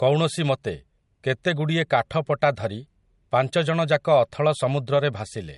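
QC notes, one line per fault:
Throughout, low-bitrate audio saved at a high bitrate: likely a low-rate MP3 re-encoded at a high rate, so the speech stays dull, with nothing above 11.2 kHz.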